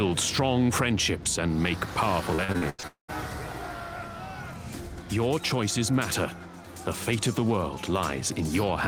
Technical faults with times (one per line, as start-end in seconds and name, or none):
2.35-2.85 repeated packet loss (robotic sound)
2.87-3.10 long network dropout